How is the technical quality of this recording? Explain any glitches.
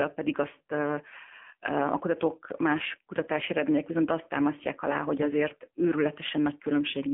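The technical quality is limited: the whole clip has passed through an AMR narrowband mobile codec, and it shows from start to finish. The sound only occupies roughly 200 Hz to 3.4 kHz, so there's no real low end and no air or sibilance on top. The speech is squeezed into a small vocal-tract model fed with a few pulses per short frame, and at this depth of damage the result is a plainly audible buzzy, synthetic edge, which fits a low mode of around 7.4 kbps.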